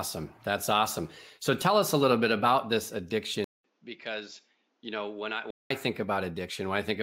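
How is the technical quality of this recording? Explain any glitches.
The recording has one glitch in the middle of the speech.

From 3.44 to 5.70 s, right after "little bit about this", the sound falls silent for about 200 ms and then returns duller and roughly 10 dB quieter, with new background noise roughly 40 dB below the speech. It is most likely an input switched to a poorer device, another microphone or a headset's call profile with a narrower band and its own noise. On a spectrogram, energy above 7.6 kHz disappears for that stretch, and the waveform shows a short gap followed by smaller peaks.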